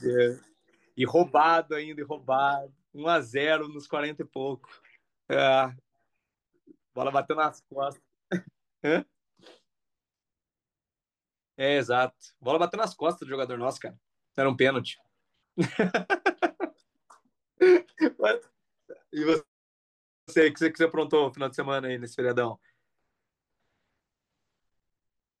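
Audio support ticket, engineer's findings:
Nothing stood out on listening to the speech recording, and there are no findings to log against this ticket.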